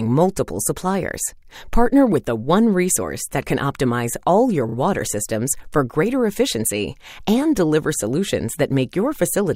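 A brief stutter from repeated frames sits at 4.69 to 4.75 s in the audio: a 32 ms block is played twice more after its first pass, which fits a single compressed frame being written or sent again, and the clip gains 64 ms.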